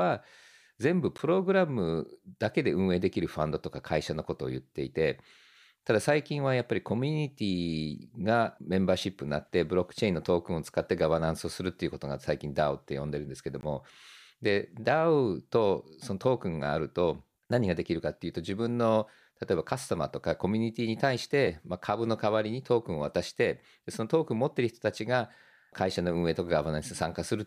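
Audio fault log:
1.18 s and 13.61–13.63 s, block of digital silence: the speech drops out hard twice, for 10 ms and then 20 ms, with no fade. The first lands as a tick. Probably the output buffer wasn't filled in time.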